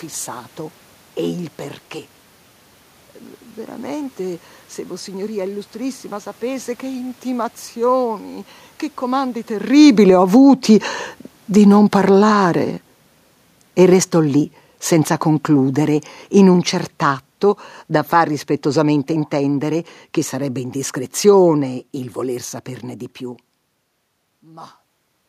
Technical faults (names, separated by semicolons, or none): automatic gain falling; automatic gain rising